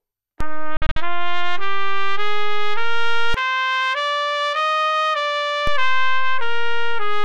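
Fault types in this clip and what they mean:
DC step: The waveform's zero line jumps to a new offset at 0.41 s, holds there, and returns at 3.34 s. A second shift starts at 5.67 s and lasts to the end at 7.24 s. Each shift is a sudden change in the signal's resting level, not in the sound itself. Each transition at 0.41, 3.34 and 5.67 s is heard as a brief low thump or click, while the audio carries on unchanged between them.
digital broadcast dropout: Between 0.77 s and 0.97 s the receiver mutes whenever incoming frames are missing or corrupt, leaving several short holes in the sound. About 120 ms of audio is lost in total, spread across a 192 ms stretch, and the longest single gap is 48 ms. Each mute fades in about 3 ms. The pattern fits roughly five lost frames, and the missing material does not come back.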